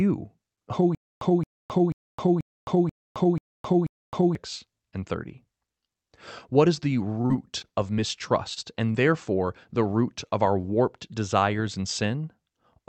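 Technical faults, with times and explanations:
0.95 to 4.35 s: stutter with silent gaps. A burst of about 222 ms plays, then about 264 ms of dead digital silence follows, and the cycle returns every 486 ms, seven times over. This is likely a stalled player or stream that replays its last fragment on each retry and then runs dry. The audio due in that span is simply gone. Unlike robotic packet loss, the gaps are truly silent rather than patched, and the repeats keep a steady, machine-like pace.
7.21 to 8.96 s: repeated packet loss (robotic sound). Ten separate holes open in quick succession, the longest about 39 ms. Each is bridged by extending the sound just before it, so roughly 197 ms of this stretch is synthetic fill and about 120 ms of real audio never arrives. The constant stitching gives a choppy texture with pieces missing. What separates it from the stutter is that there is no silence and no looped fragment, just many small smeared patches close together.
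10.29 s: short concealed packet loss. About 20 ms of audio failed to reach the decoder in time, and the receiver covered the gap with roughly 21 ms of continued sound before blending back into the real signal. It comes across as a brief smear or wobble. Unlike the robotic stretch, this is a single isolated hole, and unlike the stall after it, some audio really is missing here.
10.61 s: short stall from a late packet. A packet arrived about 22 ms late, and the jitter buffer emptied, so the last sound was held for roughly 22 ms until playback could resume from the same point. Nothing is lost. The sound is drawn out slightly, with a faint buzz or dip where it hangs. That is the difference from the concealed loss just before it: the timing shifts, but the content stays intact. The sound reaches us over a call path whose top end stops near 8 kHz.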